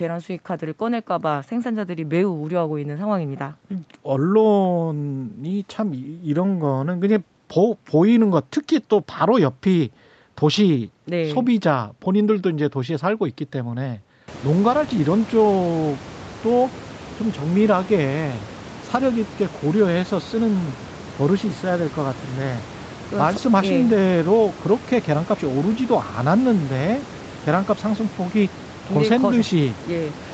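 Speech, no technical faults; the audio is band-limited to 8 kHz by the call path, and the room noise rises by about 25 dB at roughly 14 or 15 s but stays about 18 dB below the speech.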